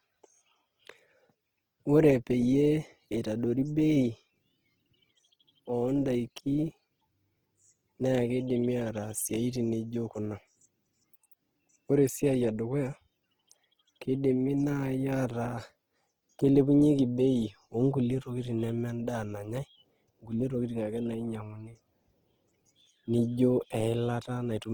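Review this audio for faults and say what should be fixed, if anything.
Opus compression runs through the whole clip. The speech sounds grainy and rough, with a noisy texture. The damage is plainly audible. The top end still reaches about 20.2 kHz, so the clip is not muffled. The cause is likely a music-mode Opus encode at a very low bitrate, around 16 kbps. Starved bands get filled with noise or folded copies of lower bands, so detail turns to grit. To prevent this, encode from the original source at a higher Opus bitrate, or keep an uncompressed master.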